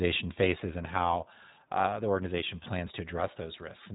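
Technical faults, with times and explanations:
throughout, iLBC codec: nothing above 3.8 kHz, and speech sounds plainly rough and synthetic; each 20 ms frame is coded independently, fitting the 15.2 kbps mode.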